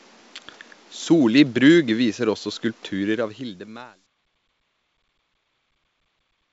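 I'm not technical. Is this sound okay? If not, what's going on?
Yes, this sound is okay: nothing here points to a problem.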